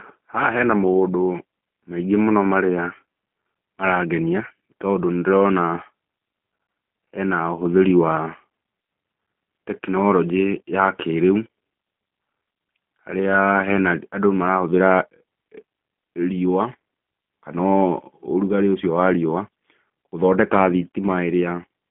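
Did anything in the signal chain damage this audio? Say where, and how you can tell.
Yes, at the codec stage, throughout. The speech is band-limited to about 150 Hz to 3.5 kHz and sounds rough and synthetic. This fits G.729 at 8 kbit/s, which rebuilds speech from a vocal tract model.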